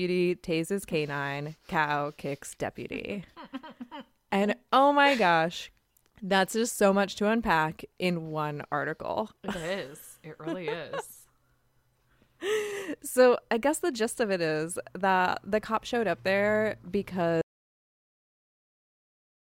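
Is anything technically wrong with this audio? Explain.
Yes. Audio dropout to silence from 17.42 s to the end: the input was likely lost while recording continued, so the speech cuts off into silence, without room tone.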